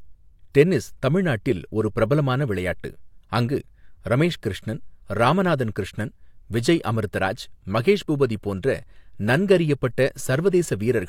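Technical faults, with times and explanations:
No technical faults can be heard anywhere in the speech. Nothing in the recording points to a problem in how it was captured, processed or played back.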